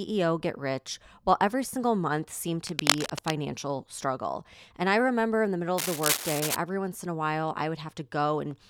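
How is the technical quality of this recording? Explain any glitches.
The recording has two bursts of cable scratch noise, from 2.67 to 3.31 s after "every single month seemed" and from 5.78 to 6.56 s, between "remember in the middle" and "once in a while". These are likely caused by a worn cable or connector shifting, making the contact resistance flicker. Each burst adds rough scratching roughly as loud as the speech.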